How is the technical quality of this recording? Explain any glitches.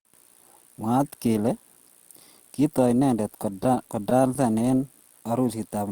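The recording has one clear glitch, a stutter near the end. From 3.43 to 4.62 s, packets arrived late and the jitter buffer kept running empty, causing repeated stalls (stutter): brief bridged pauses, none longer than 16 ms, that make the speech drag.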